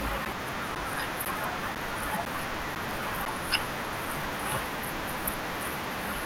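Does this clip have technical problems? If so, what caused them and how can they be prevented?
Yes: periodic USB or driver dropouts from 0.25 to 3.26 s. A blocked bus or driver silences about 10 ms every 0.5 s, heard as regular ticks and seen as thin vertical gaps. Stop the interrupting background task or enlarge the audio buffer to prevent it.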